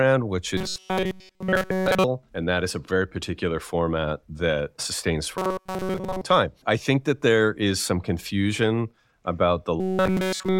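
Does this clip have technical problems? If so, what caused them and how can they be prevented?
Yes. Robotic sound from repeated short buffers occurs at 0.57 to 2.04 s, 5.38 to 6.21 s (after "particular format that sustains", before "time I think that") and 9.80 to 10.59 s. Nearly all the audio there is a single 5.3 ms slice replayed, likely because new audio arrived too late. Those repeats force a fixed 188 Hz buzz. Codec smearing sounds watery and still follows the speech's pitch, but this buzz stays locked at one pitch. A larger playback buffer or steadier audio delivery prevents it.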